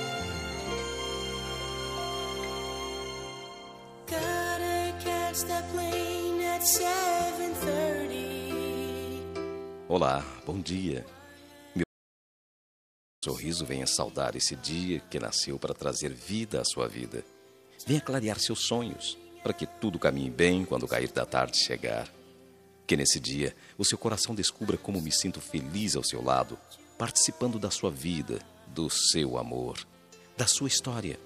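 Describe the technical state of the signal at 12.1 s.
At 12.1 s the signal is in an audio dropout to silence running from 11.84 to 13.22 s, about 1.38 s of lost sound. The input was likely cut off while recording continued, writing silence. Unlike a noise gate or a pause, no room tone survives, and the sound stops and resumes abruptly.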